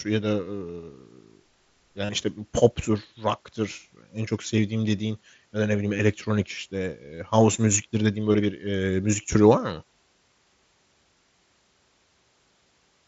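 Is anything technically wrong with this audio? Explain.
Yes, there's concealed Bluetooth headset packet loss at 2.05 to 2.09 s, 3.73, 5.97, 8.33 and 12.68 s, heard through the mSBC headset link's 8 kHz band. Lost packets get filled by repeating the best-matching recent stretch of waveform, which gives a short buzzy patch where several packets drop in a row. The longest gap is the one at 2.05 s, at about 40 ms.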